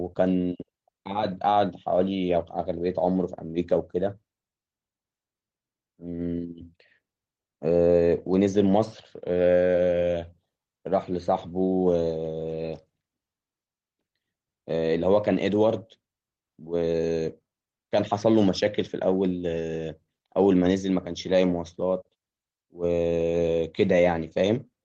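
There are no technical faults to describe at any point in this speech recording.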